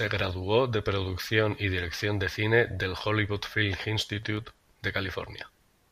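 CD scratch ticks appear from 3.95 to 4.37 s: four short ticks at regular spacing, each about a millisecond at most. A scratch on the disc wipes out more data than error correction can restore, so the player patches or mutes those samples.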